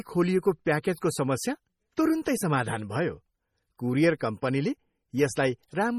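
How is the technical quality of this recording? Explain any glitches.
The recording is heavily degraded throughout by lossy coding, with two brief smeared attacks.

MP3 compression, likely, runs the whole length. The speech sounds watery and swirly, with faint lines flickering between frames and the top ending at 19.7 kHz. The damage fits a bitrate near 32 kbps. Unlike plain low-pass filtering, the texture shimmers rather than simply dulling.

Pre-echo appears at 1.96 s and 4.20 s. A short hiss spreads ahead of a sharp onset, about 19 ms and 10 ms, because the codec smears its noise across the block containing the attack. That leading hiss, rather than a click or dropout, sets it apart.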